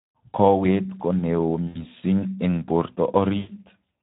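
Speex codec damage runs from the start to the end of the speech. This CELP coder has too few bits for its excitation signal, leaving the speech plainly hoarse and noisy, which fits a low setting of around 11 kbps.

VoIP packet loss concealed by the speech codec appears from 1.67 to 1.85 s, after "ko neoo" and before "eng borto", and again from 3.37 to 3.51 s, after "eng borto". The decoder fills each gap of roughly 80 ms and 120 ms by repeating its last pitch and filter at falling gain. This gives a stretched buzzy tone or coloured noise that fades, and the speech stays weak for a moment after the gap.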